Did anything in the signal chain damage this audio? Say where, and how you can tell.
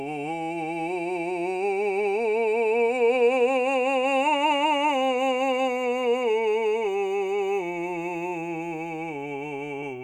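No, nothing in the signal chain has damaged this music; the signal holds together with no audible disturbance from any stage between capture and playback.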